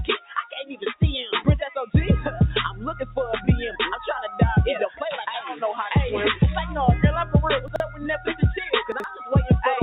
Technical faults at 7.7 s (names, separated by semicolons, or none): noise suppressor applied to music or sounds; chunks out of order